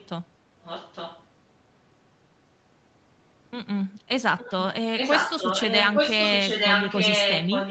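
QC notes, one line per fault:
0.0–0.09 s, 0.63–1.24 s, 4.38–4.67 s, 4.96 s to end: echo leak, a copy of the speech trailing by 0.86 s, faint at first, as loud as the speech by the end, likely a loudspeaker echo the far-end canceller missed.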